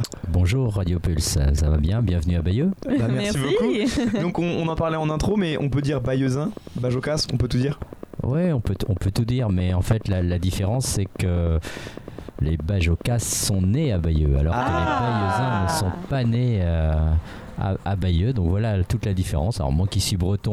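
A regular train of clicks runs through the sound from 0.04 s to 16.36 s. The clicks come at about 9.6 per second, evenly spaced, roughly 150 in all. Each one has much the same sharp shape. They sit well on top of the audio, peaking about 5 dB above it, so they tick through quiet gaps as well. Such a steady pulse most likely comes from electrical interference or a faulty connection or power supply.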